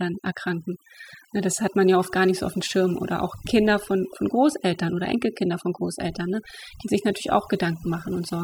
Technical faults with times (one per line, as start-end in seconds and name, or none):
0.00-8.44 overdone noise removal